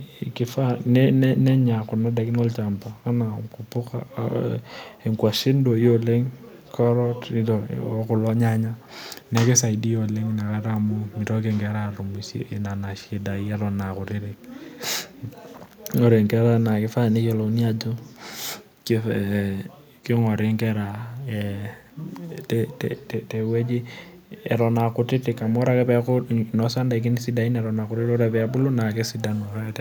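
A speech recording with an echo leak: most likely the far end was on a loudspeaker and its echo canceller failed to fully strip what its microphone picked up, so a delayed copy came back down the line. It surfaces as a single brief scrap from 0.8 to 0.86 s, a returned fragment of the speech arriving about 343 ms late and very faint, sitting roughly 40 dB below the direct speech.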